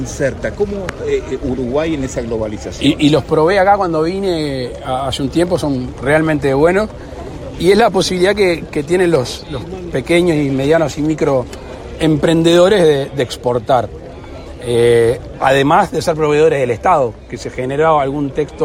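No technical faults are audible.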